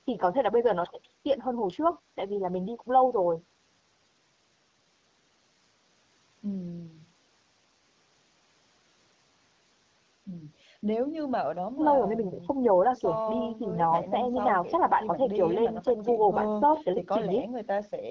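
Nothing goes wrong here: it's speech that has come through a call's usual microphone processing and an HD Voice link, with the top end stopping around 8 kHz, and there's no fault to point to anywhere along the way.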